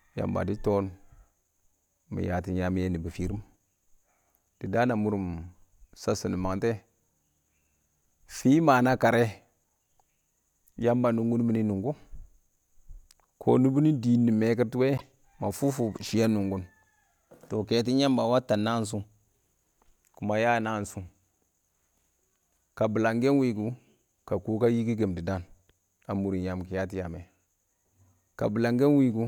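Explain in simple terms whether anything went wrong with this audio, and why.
At about 14.97 to 15.02 s the speech skips forward with a brief glitch. The likely cause is a broken MP3 bit reservoir: after a cut, the next MP3 frames look back for borrowed data and find bytes from unrelated frames.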